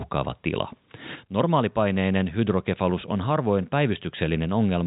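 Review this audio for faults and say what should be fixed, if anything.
No faults; nothing to fix.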